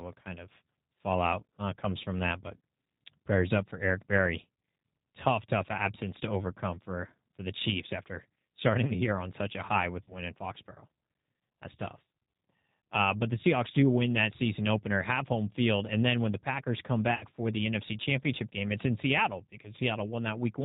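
G.729 codec, heard across the whole recording: the speech is rebuilt at 8 kbit/s from a vocal tract filter, a pitch predictor and a few pulses per frame, so nothing above 4 kHz survives and the voice sounds plainly rough and synthetic.

VoIP packet loss concealed by the speech codec appears at 10.03 to 10.14 s, right after "such a high with", and again at 17.15 to 17.25 s, just before "for the". In the first gap about 40 ms of audio went missing, which fits two lost packets, and in the second about 60 ms, which fits three. Each time the decoder extended its last pitch and filter at falling gain, leaving a buzzy tone or coloured noise that fades, and the voice stays weakened briefly after packets resume.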